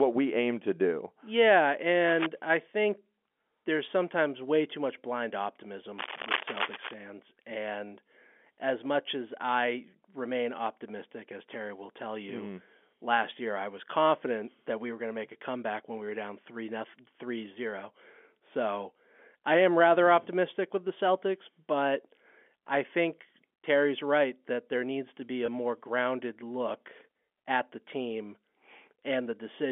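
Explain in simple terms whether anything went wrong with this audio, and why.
A couple of things went wrong. At 2.08 to 2.27 s, just before "I think", and again from 5.98 to 6.94 s, there's a rough scratching rustle over the speech. That's cable scratch noise, likely from a worn cable or connector being moved, and the second burst is about as loud as the speech itself.

Later, between 25.46 and 25.48 s, right after "there needs to be" and before "more grounded look at", one packet of about 20 ms went missing. This is packet loss with pitch repetition: the receiver filled the gap by repeating the last bit of voice, so you hear a tiny held, buzzy blip on the phone line.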